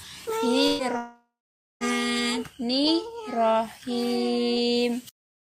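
From 0.67 to 0.82 s, a burst of packet loss: about 120 ms never arrived, concealed by the last sound held and fading, shown as smeared horizontal spectrogram bands before an abrupt restart.

From 0.97 to 1.84 s, the sound stretches into a decaying buzz or hiss, then about 520 ms of flat silence in the waveform; a long network dropout is the likely cause.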